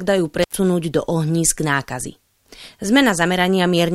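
A loose cable or plug in the signal chain briefly opens in this speech recording, a classic intermittent contact fault. Between 0.43 and 0.55 s the connection breaks for about 98 ms, so the sound drops out abruptly with crackle at each edge as the contact scrapes open and closed, leaving faint hiss in the gap. The signal returns just before "do ohnízk nákazy".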